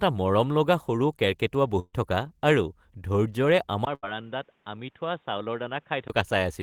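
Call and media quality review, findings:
Burst of packet loss at 1.79–1.95 s and 3.95–4.05 s. Receiver concealment extends the last sound as a fading held tone, about 135 ms then 40 ms of silence at the first, 76 ms at the second. Roughly 140 ms and 80 ms of speech skipped on resume.

Input switched to a poorer device at 3.85 s, likely a fallback to a headset call profile or a secondary mic. A 20 ms dropout at the switch, then band-limited, with nothing above 3.8 kHz. Level about 10 dB lower, with a new noise floor roughly 30 dB under the speech. Full band returns at 6.10 s.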